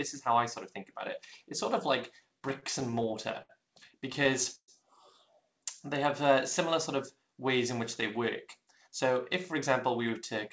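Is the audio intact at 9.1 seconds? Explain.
No. From 8.21 to 9.11 s the sound runs hurried, at about 105% speed with its pitch unchanged. This is a jitter buffer speed-up: holding more audio than intended, the receiver cut short pitch-period-length pieces in succession, removing roughly 50 ms in total.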